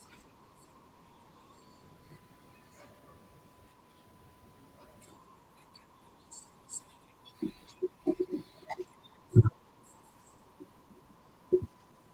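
Nothing in the recording stood out as a technical problem on listening.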